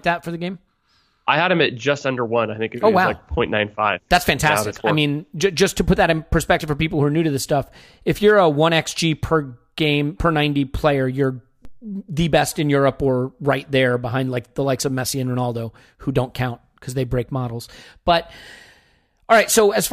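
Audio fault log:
11.65 s, DC step: between "player you're" and "the best in", the waveform's zero line suddenly jumps by about -29 dBFS. The shift is abrupt, so it lands as a single low thump, while the speech carries on unchanged. The offset does not hold. It drains away through a very low high-pass around 2 Hz, so the baseline creeps back to centre within a fraction of a second.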